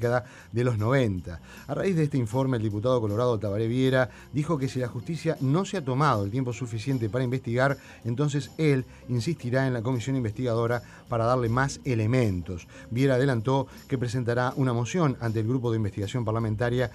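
Nothing in the audio stood out as a technical fault on listening.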